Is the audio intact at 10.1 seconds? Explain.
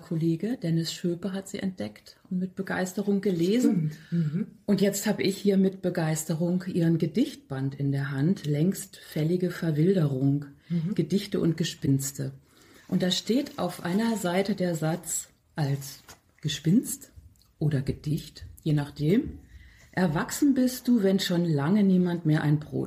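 Yes, the audio is intact at 10.1 seconds, with no dropout, click, distortion or other fault at that point.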